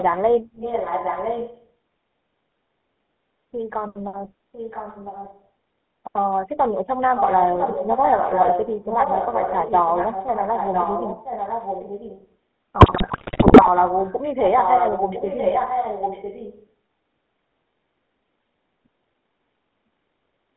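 Throughout, the sound carries the buzzy, gravelly roughness of the GSM full-rate codec. The band runs from about 200 Hz to 3.5 kHz, so there is no top end at all. The coder rebuilds the voice from a vocal-tract filter driven by sparse, regular pulses. That coarse excitation causes the grit. The damage is plainly audible, and the grain fits the 13 kbps GSM full-rate coder.

Echo leak starts at 0.00 s. A moderate copy appears up to 0.04 s. A stronger one runs from 0.52 to 1.68 s. A weak one follows from 4.52 to 5.45 s. Another strong stretch lasts from 7.16 to 12.34 s. Each copy trails the voice by 1.00 s. Its likely cause is a loudspeaker on one side, with an echo canceller that let part of the microphone pickup back into the call.

From 12.78 to 13.69 s, GSM bit errors break the voice into squawks, pops and gargling. The error rate is heavy. Corrupted filter, pitch and gain values reached the decoder. 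Many consecutive frames came out with a bent spectrum or a sudden jump in level.

The echo returns from 13.87 to 14.17 s, faint this time. It comes back strongly from 14.45 to 16.68 s, again 1.00 s behind. The call's microphone high-pass removes only the deepest bass.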